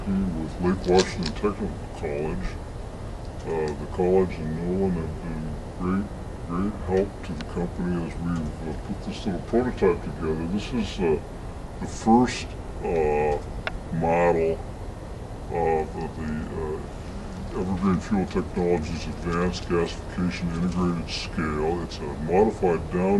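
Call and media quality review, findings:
Wrong sample rate, throughout. Audio runs slow and low, about 0.73x speed, pitch down about 5.5 semitones. Fits 44.1 kHz material played at 32 kHz without conversion.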